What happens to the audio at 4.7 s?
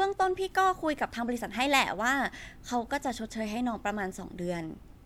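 Nothing goes wrong at 4.7 s; the audio there is intact, with no dropout, click, distortion or other fault.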